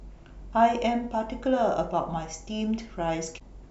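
A short glitch cuts through the speech from 3.36 to 3.41 s: damaged data in a compressed stream, where corrupted frames made the decoder lose sync.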